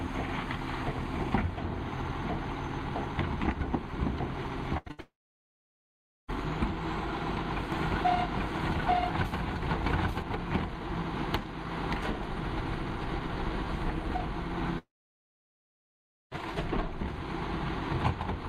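The audio breaks up around the 5 s mark, then develops further problems. A burst of packet loss runs from 4.77 to 4.88 s and again from 4.91 to 5.00 s. Each time the receiver extends the last sound for roughly 70 to 85 ms as a decaying buzz or hiss, and the playback resumes with about 80 ms of material missing. Between those two bursts, from 4.88 to 4.91 s, a short concealed packet loss appears as a brief smear: about 20 ms never arrived and was patched by continuing the preceding sound before blending back. A long network dropout follows from 5.00 to 6.30 s. The concealment tail dies away quickly and leaves about 1.17 s of silence, with roughly 1.28 s of audio lost. The likely cause is the stream stalling entirely. A second long network dropout, from 14.78 to 16.39 s, behaves the same way, with about 1.46 s of silence and around 1.54 s missing. From 7.72 to 10.22 s a doubled audio track is heard. 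A full-band copy at about the same level trails roughly a second behind, with no reverberant colouring, and it switches in and out abruptly. This is likely a second capture path or an editing overlap.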